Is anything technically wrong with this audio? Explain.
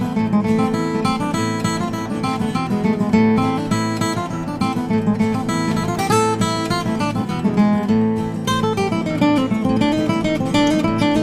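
No, nothing technically wrong stood out on listening to this audio.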